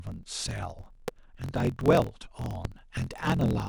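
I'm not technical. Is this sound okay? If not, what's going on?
No. Throughout, there is a block size mismatch (truncated): one stage hands over longer chunks of audio than the next stage reads, which fits a 1024-sample read, so each chunk's end is dropped. The speech runs about 1.12 times fast with its timbre unchanged, with a low 43 Hz buzz.

There are also two loud pops, at 1.08 to 1.10 s and at 2.65 to 2.67 s. A sudden electrical jolt, likely from a plug, switch, static or driver glitch, got added to the signal, giving a sharp pop much louder than the speech, which continues underneath.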